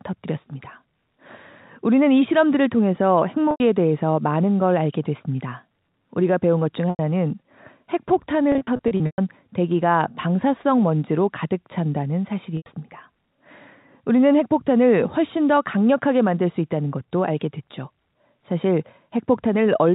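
Packet loss with pitch repetition hits at 3.51–3.60 s, 6.90–6.99 s and 12.57–12.66 s, each gap about 90 ms, which fits three 30 ms packets. The receiver loops the last pitch period, so each gap sounds like a brief held buzz. On a spectrogram this looks like frozen, evenly spaced harmonics. On the waveform it looks like identical repeated cycles that taper off. Between 8.52 and 9.18 s, about 300 ms is lost in scattered bursts, the longest about 120 ms, long enough to fade into silence before the speech returns with a short cross-fade. The G.711 telephone band caps everything at 4 kHz.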